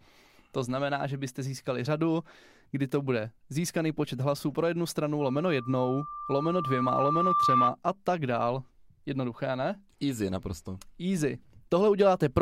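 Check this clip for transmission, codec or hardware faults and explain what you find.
One fault is present, a loudspeaker feedback squeal. From 5.20 to 7.74 s, after "hlasů pro jednu stranu", a steady 1.2 kHz tone swells over about two seconds to about 5 dB above the speech, ending before "a tak dál". The microphone is picking up its own loudspeaker, and at 1.2 kHz the loop gain exceeds one, so that tone keeps reinforcing itself.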